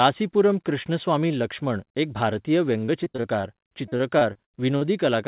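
Repeated packet loss (robotic sound) runs from 2.86 to 4.83 s, just after "कृष्णस्वामी लक्ष्मण एक भारतीय". Missing packets keep being patched by stretching the preceding sound, in gaps of up to 44 ms covering about a sixth of that span, so the speech turns choppy with pieces missing. The speech is band-limited to 4 kHz throughout, which fits a G.711 call codec.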